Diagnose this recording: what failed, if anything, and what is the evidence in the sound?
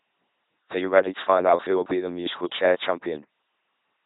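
Codec stage: an LPC-10 vocoder throughout. Speech buzzes robotically, with nothing above 3.9 kHz. Each moment is pulse-driven or noise-driven, which fits 2.4 kbit/s coding.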